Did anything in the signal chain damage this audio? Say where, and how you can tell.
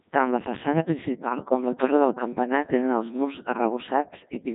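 Yes. The codec stage damaged the whole clip. This speech has been through the Codec 2 vocoder, and the damage is heavy. The voice sounds robotic and buzzy from start to finish. It is rebuilt from sine waves at a pitch, voicing and energy, shaped by a coarse spectral envelope. The original waveform is gone, so natural texture is lost. The thin, synthetic character fits the 1.6 kbit/s mode.

There are also bit errors on digital voice radio, at the radio link feeding that vocoder. The first is at 1.48 to 1.54 s, between "la façana principal" and "la torre del campanar". The second is at 3.52 to 3.58 s, right after "campanar tenen els murs". Each is a brief warble or bleep with a sudden jump in pitch, level and tone. Each burst is short enough to point to one corrupted frame. The error rate was roughly 7 percent at the first and 15 percent at the second.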